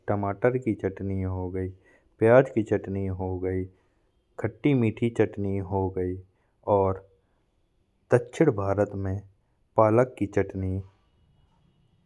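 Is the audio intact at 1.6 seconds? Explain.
Yes, the speech at 1.6 seconds plays through cleanly, with no audible fault at that moment.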